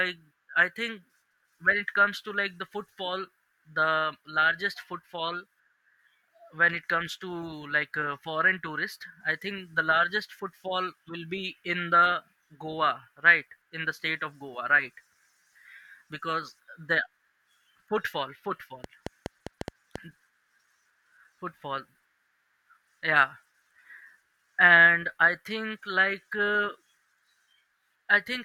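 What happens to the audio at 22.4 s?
Nothing goes wrong at 22.4 s; the speech runs on intact through that moment, with no dropout, click or distortion.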